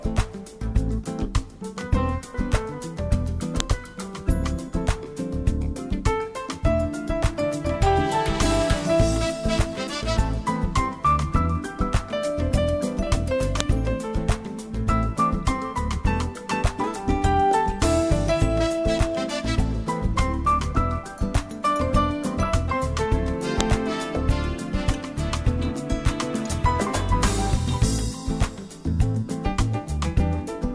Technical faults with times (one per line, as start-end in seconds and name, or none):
3.60 file header played as audio
13.60 file header played as audio
23.61 file header played as audio